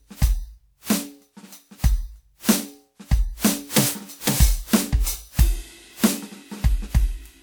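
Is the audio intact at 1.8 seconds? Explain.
No. At 1.8 seconds, as across the whole clip, the music shows generation loss. It was likely decoded and re-encoded around seven times through a lossy codec, with the sound pointing to WMA at roughly 96 kbit/s. Each pass quantised the signal again on a shifted frame grid, so noise piled up. The result sounds swirly, smeared and hollow beyond what that bitrate alone would give, with blurred attacks, though the band still reaches about 20.1 kHz.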